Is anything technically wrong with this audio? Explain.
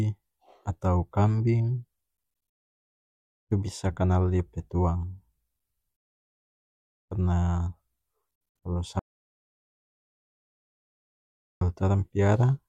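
Yes. From 8.99 s to 11.61 s there's an audio dropout to silence: the speech cuts off mid-flow and about 2.6 s is simply gone, pure silence with no room tone underneath. Likely the input dropped out, a link or device, while the recorder kept writing.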